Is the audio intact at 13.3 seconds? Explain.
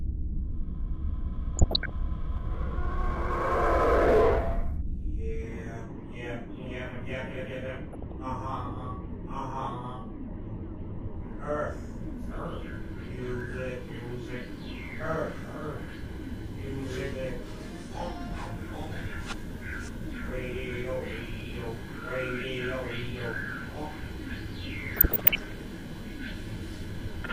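Yes, the audio is intact at 13.3 seconds, with no dropout, click, distortion or other fault at that point.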